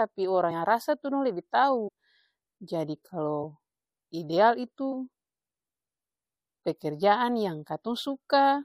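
At 0.50 s and again at 4.91 s, compressed frames are skipped: whole frames of the coded speech never reach the output, either missing from the stream or rejected by the decoder as corrupt. Playback jumps forward by roughly 70 ms at the first point and roughly 50 ms at the second.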